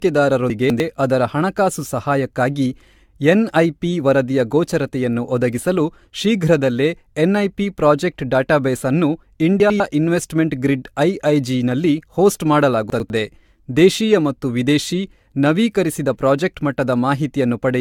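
From the start the speech sounds swirly, smeared and hollow, consonant attacks blur, and nothing is present above 17.6 kHz. This is generation loss, likely from around seven successive AAC-LC passes at 96 kbit/s, each requantising on a shifted frame grid so that noise and spectral holes accumulate.

At 0.5 to 0.8 s, just before "ಅದರ ಹಣಕಾಸು ಸಹಾಯಕ್ಕಾಗಿ", a brief jumbled moment is heard. This is chunks out of order: a 100 ms piece plays two chunks late. It recurs at 9.6 to 9.8 s, between "ಎನ್ಐಪಿ ಪ್ರಾಜೆಕ್ಟ್ ಡೇಟಾಬೇಸ್ ಅನ್ನು" and "ಇನ್ವೆಸ್ಟ್ಮೆಂಟ್ ಗ್ರಿಡ್", and at 12.9 to 13.1 s, after "ನಲ್ಲಿ ಹೋಸ್ಟ್", each time with a chunk one place late, leaving hard joins.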